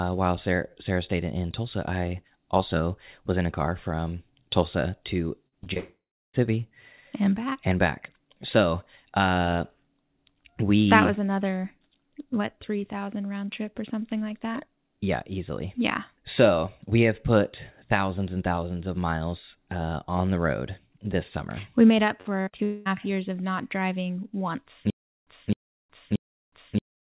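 At 5.48 s, 5.64 s and 5.74 s there is short concealed packet loss. About 40, 20 and 20 ms of audio failed to arrive in time. Each hole was patched by extending the preceding sound. It comes across as quick smears or wobbles.

From 5.78 to 6.35 s comes a long network dropout, likely caused by a stretch where no packets arrived. The patched sound fades away. Then about 340 ms of silence follows before the audio returns with a piece missing.

After "summer we made up", from 22.21 to 22.60 s, repeated packet loss gives a robotic sound. Four gaps, the longest 55 ms, are filled one after another. Together they cover about 38% of that stretch, so it sounds choppy.

A second long network dropout runs from 22.64 to 22.87 s, just before "years of not driving". It likely comes from another gap in delivery. About 220 ms is lost. The concealment carries through without going silent, so it is a smeared blur rather than a hole.

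After "of not driving once", from 24.90 s to the end, there is a stutter with silent gaps, likely from a stalled stream. A 262 ms burst repeats every 628 ms. Each repeat is followed by about 366 ms of digital silence.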